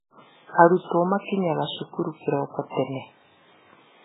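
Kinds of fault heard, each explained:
MP3 compression: nothing above about 3.8 kHz, with watery, swirling speech and smeared attacks throughout, likely from heavy low-bitrate encoding near 8 kbps.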